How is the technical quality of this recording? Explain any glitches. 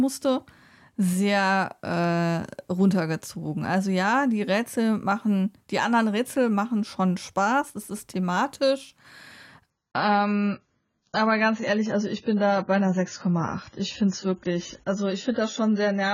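The first part of the speech sounds clean, but there's one clear glitch: at 9.7 s the quality drops suddenly and stays down to the end. That's an adaptive stream switching to a lower bitrate. The connection slowed, so the player swapped to a leaner encode without any gap. Nothing above 7 kHz survives, so the speech turns dull, with more codec artefacts. That fits a jump from roughly 96 down to 16 kbit/s AAC.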